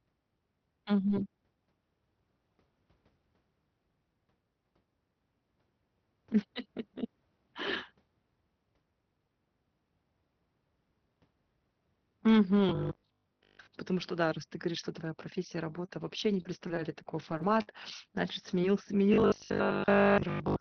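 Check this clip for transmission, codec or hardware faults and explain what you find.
Yes, there's a fair bit going on, mostly in the second half. Underneath it all the call path itself sounds band-limited to about 6 kHz, which fits Opus running around 24 kbps.

From 12.69 to 13.73 s, and again from 19.14 s to the end, there's robotic sound from repeated short buffers. The voice collapses into a stiff, metallic buzz at a steady 50 Hz that only loosely tracks the speech. That's likely the playback side starving for data and looping the last chunk, which fits a 20 ms buffer. Most of that stretch is repeats rather than fresh audio, so real material gets skipped.

There are two spots of short concealed packet loss. The first runs 15.85 to 15.89 s, right after "говоришь что твоя профессия" and before "вообще не". About 30 ms never arrived, and the decoder papered over it by extending the last sound, so you get a brief smear rather than a hole. 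The second is a brief smear around 18.62 to 18.64 s, roughly 20 ms long.

From 16.42 to 17.81 s, just after "вообще не", there's repeated packet loss with a robotic edge. I count around seven separate dropouts, the longest about 48 ms, and each gets patched by continuing the previous sound. Only about a tenth of the span is concealed, but because the patches keep coming close together the speech turns choppy, with small pieces missing.

At 18.63 s, inside that second short dropout, part of the missing audio came back as a lost packet rebuilt from error correction. Opus carries a low-bitrate copy of the previous frame in the next packet, so the decoder played about 10 ms of that instead of guessing. There's no gap there, just a moment that sounds rougher and noisier than what's around it.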